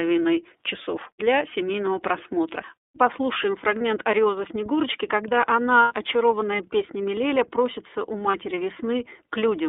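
Throughout, the speech passes through the iLBC codec: a line band of roughly 300 Hz to 3.6 kHz, with a plainly rough, synthetic edge that fits its 13.33 kbps, 30 ms frame mode. Unlike a muffled low-pass, the roughness lives in the excitation itself.

Lost iLBC frames occur at 3.78 s (30 ms), from 5.81 to 5.93 s just before "очарованная песнями" (90 ms), and at 8.31 s (30 ms) right after "просится у". Instead of silent dropouts, the decoder fills each gap with a held, buzzy repeated pitch cycle. The voice returns almost at once after each one, with no smeared recovery.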